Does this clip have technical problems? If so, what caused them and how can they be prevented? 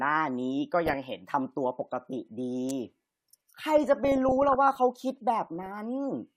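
Yes. From 0.84 to 1.04 s, 3.78 to 4.76 s and 5.47 to 5.78 s the speech burbles. This is DAB burbling: weak reception lets bit errors of roughly 0.3 to 0.5 percent past error correction, corrupting sub-band levels frame by frame. A better-sited antenna or stronger multiplex signal would prevent it.

At 2.69 s a sharp snap cuts in, likely an electrical switching spike from a nearby switch or motor arcing into the audio line. Suppressing that equipment and shielding the cabling would prevent it.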